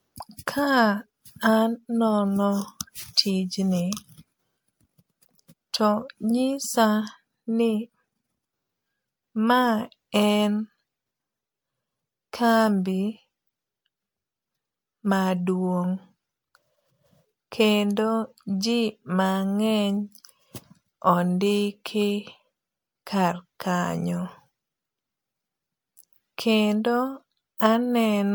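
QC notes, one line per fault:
throughout, generation loss. The speech sounds swirly, smeared and hollow, and consonant attacks blur. The band still reaches about 20.1 kHz, so the hollowness is not a simple bandwidth cut. The likely cause is repeated MP3 decoding and re-encoding, roughly five passes, with a character that fits around 96 kbit/s. Each pass quantises on a shifted frame grid. Noise and spectral holes stack up beyond what one encode at that rate would leave.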